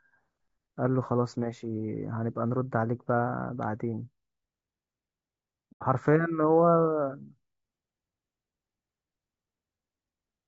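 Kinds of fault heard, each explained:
Low-delay AAC compression: The speech sounds rough and grainy throughout, with noise between harmonics. Short-frame AAC-ELD at around 32 kbps is the likely cause.
AAC frame loss with muting: At 5.72 s the audio fades to a soft-edged silence for about 0.1 s. Roughly three lost frames were zeroed.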